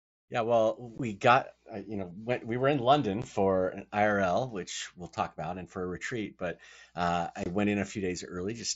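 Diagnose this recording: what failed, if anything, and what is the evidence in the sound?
The failure is unconcealed Bluetooth headset packet loss, on the radio link between headset and phone. The speech cuts out abruptly at 0.98 s and 3.22 s, each gap about 15 ms long. A longer hole of about 22.5 ms runs from 7.44 to 7.46 s. The edges are hard. Nothing fills the holes. Silence or an idle pattern replaces the missing audio. The gap lengths fit two and three lost 7.5 ms mSBC frames on the wideband link.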